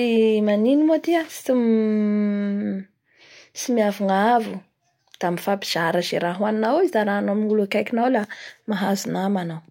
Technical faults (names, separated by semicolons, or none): none